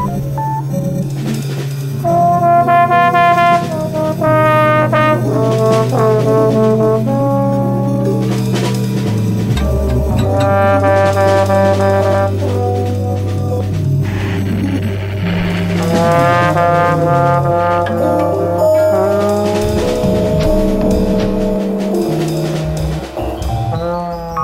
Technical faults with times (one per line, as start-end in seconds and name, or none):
none